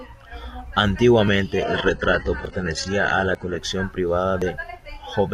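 At 1.28 s there is a small forward jump in the speech, and the same skip recurs at 2.45, 3.35 and 4.42 s. That last jump is the longest, about 70 ms, and the others are a few hundredths. Each is likely a dropped buffer (overrun), where samples weren't collected before being overwritten, so the two sides are joined with no gap.

From 1.63 to 3.56 s the speech abruptly takes on stronger codec artefacts. This is an adaptive stream at a lower bitrate. The sound points to a switch from full-rate AAC to a very low-rate HE-AAC version while the connection slowed.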